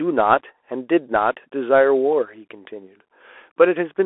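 From start to end the speech carries Bluetooth CVSD headset codec damage, and it is plainly audible. The codec tracks the waveform one bit at a time, nudging its level up or down with an adapting step, which fits a 64 kbps link. The result sounds like a telephone: thin, boxed into roughly 300 Hz to 3.4 kHz, with a granular hiss beneath and scratchy s sounds. A spectrogram shows an empty band above 3.8 kHz, and the waveform looks fine-grained and stepped.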